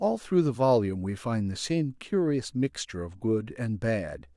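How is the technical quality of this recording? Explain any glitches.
No glitches or technical faults can be heard here.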